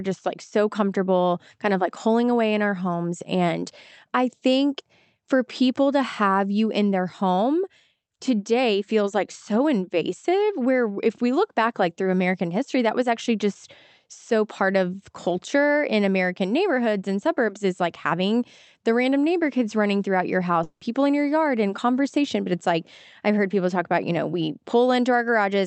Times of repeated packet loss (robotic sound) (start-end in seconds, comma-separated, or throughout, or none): none